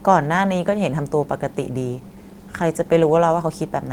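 A call bitrate drop runs from 1.9 s to 3.25 s. The call's bandwidth estimate fell, so the encoder was forced to spend far fewer bits on the speech, quantising it more coarsely. For about 1.2 s the speech turns rough and watery. The degree of degradation fits a fall from around 32 kbps to around 18 kbps. Clarity returns at 3.25 s, once the available bitrate climbs back.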